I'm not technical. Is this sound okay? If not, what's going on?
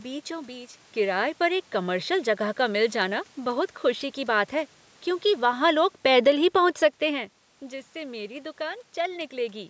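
No. From 5.24 to 7.33 seconds, the automatic gain control, which sets the recording level by itself, judged the input too loud or its background noise too strong and turned itself down gradually. This is automatic gain falling: the speech and its background noise sink a little together.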